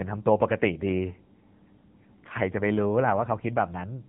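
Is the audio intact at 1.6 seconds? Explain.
No, at 1.6 seconds the speech is running through the AMR narrowband mobile codec, just like the rest of the clip. It samples at 8 kHz and rebuilds the voice from a vocal-tract model fed by a handful of pulses per 5 ms subframe, so nothing gets through above about 3.8 kHz. The damage is plainly audible: a muffled, buzzy, synthetic tone that points to a low rate, something like 8 kbps.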